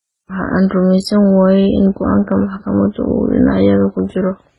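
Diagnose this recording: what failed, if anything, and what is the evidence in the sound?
This is a codec-stage problem: the speech shows transcoding between lossy codecs, likely several low-bitrate encoders ending in something like HE-AAC. Throughout, nothing reaches above 11.7 kHz, and mismatched artefacts pile up as each encoder spends its bits re-coding the last one's damage.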